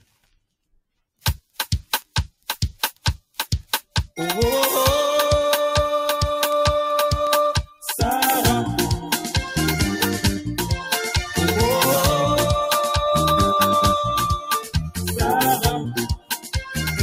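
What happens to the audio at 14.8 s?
At 14.8 s the sound sinks sharply, falling by about 18 dB in the span from 14.36 to 14.98 s, with around half a second of it pulled down. This is sound cut by the noise suppressor, which mistook this passage for noise and attenuated it far more than its surroundings.

Underneath that dip, the level keeps swelling and sagging by a few decibels. That comes from a noise suppressor applied to music or sounds, one built for speech that treats steady, sustained material as noise and keeps turning it down.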